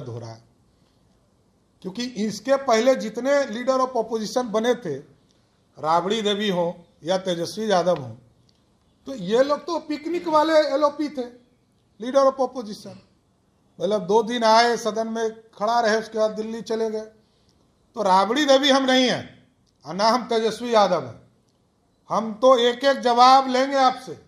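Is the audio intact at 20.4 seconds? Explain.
Yes, the audio is intact at 20.4 seconds, with no dropout, glitch or other fault at that moment.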